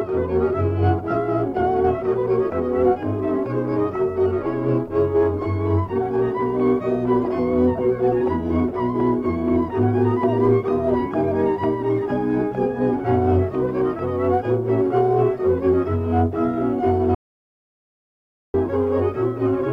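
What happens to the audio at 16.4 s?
Nothing goes wrong at 16.4 s; the audio plays through that moment intact, with no dropout, click or other fault.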